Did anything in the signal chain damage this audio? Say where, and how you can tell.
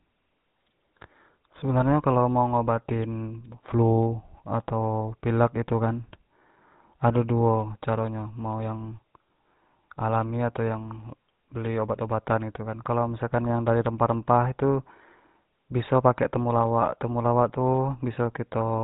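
Yes. The damage happened at the codec stage: the whole speech clip has been through a GSM full-rate codec. Throughout, it has the buzzy, gravelly roughness of a vocal-tract model excited by a regular pulse train that keeps only every third excitation sample. The coarseness fits a 13 kbps rate. On a spectrogram, all energy stops sharply at 3.8 kHz, and harmonics look smeared and grainy rather than clean.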